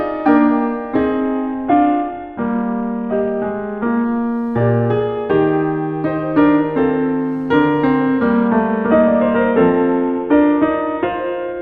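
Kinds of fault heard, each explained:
Bluetooth SBC bit pool drop: the music goes dull and gritty at 1.2–4.05 s and from 8.48 s, fitting a starved bit pool. Unlike steady filtering, the treble returns in between.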